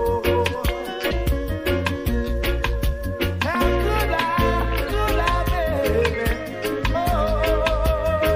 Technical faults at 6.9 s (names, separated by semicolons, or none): MP3 compression; damaged data in a compressed stream